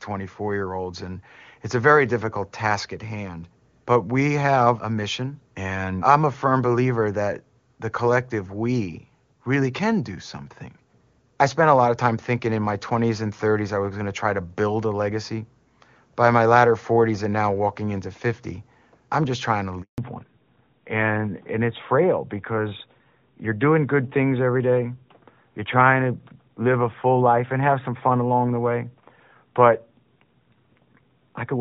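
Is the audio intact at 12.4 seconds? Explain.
Yes, the audio is intact at 12.4 seconds, with no fault at that moment.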